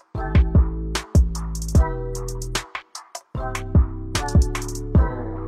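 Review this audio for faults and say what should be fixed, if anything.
No faults can be heard in this audio, so nothing needs to be fixed. It can be kept as it is.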